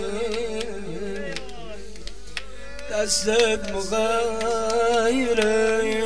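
No technical faults can be heard anywhere here.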